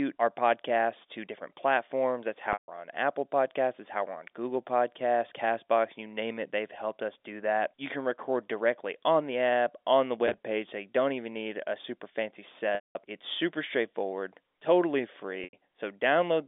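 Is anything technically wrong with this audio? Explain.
Yes. There are four dropouts from packet loss with pitch repetition. At 2.53 s, about 150 ms goes missing. At 10.27 s, after "the app on the", 50 ms is lost in short bursts spread over 120 ms. At 12.75 s, after "need a super fancy", 200 ms is lost. At 15.44 s, after "super straightforward totally", 90 ms is lost. The receiver fills each gap by repeating the last pitch period and fading it out over about 50 ms. The short bursts at 10.27 s sound like a briefly held, buzzy tone. The longer gaps fade into silence, and the speech then cross-fades back in.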